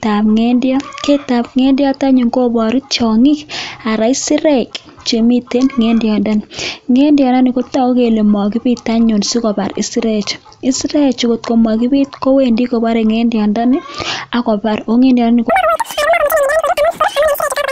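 A wrong sample rate hits this speech clip from 15.50 s to the end at 17.72 s, just after "kobore ngendyondoni akobar kongendyondoni". The samples run 2.76 times too fast with no conversion, so pitch jumps about 17.6 semitones and the talking turns shrill and hurried, which fits 16 kHz audio played back at 44.1 kHz.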